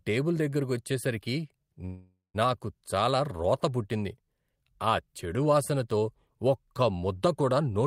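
Speech clip with a call audio freeze from 1.85 to 2.36 s: sound smears into a fading buzz, then about 150 ms of silence, likely jitter-buffer underrun. Unlike a dropout, nothing is lost; speech resumes where it stopped, about 0.49 s late.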